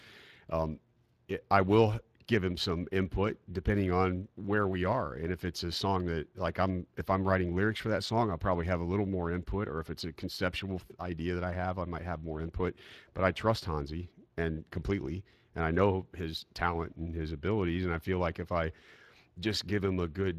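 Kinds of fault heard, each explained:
Speex codec: The whole recording carries the sound of Speex, a CELP speech codec once common in VoIP and game chat, at a setting that points to a mid-range rate of roughly 22 kbps. With a limited bit budget for the excitation, the speech comes out noisy and somewhat hoarse, and the damage is plainly audible from start to finish. The top of the band, above 8 kHz, sounds like shaped noise rather than real detail.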